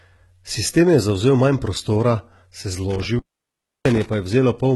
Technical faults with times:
0.00-4.75 HE-AAC compression
2.91-4.14 intermittent contact

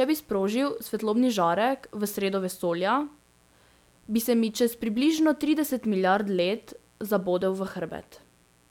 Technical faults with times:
0.00-8.70 mains buzz

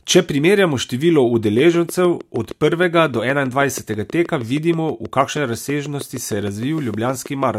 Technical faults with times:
1.59-7.44 train of clicks

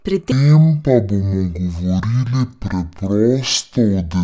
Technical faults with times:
0.32-4.24 wrong sample rate

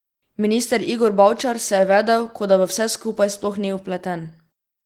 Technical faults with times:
none

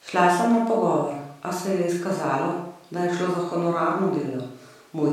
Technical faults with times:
none

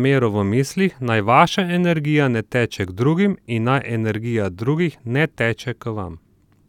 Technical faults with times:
none

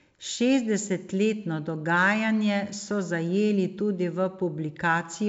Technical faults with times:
none

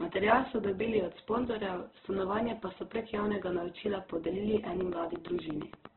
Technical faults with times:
0.00-5.96 Opus compression
4.57-5.86 train of clicks

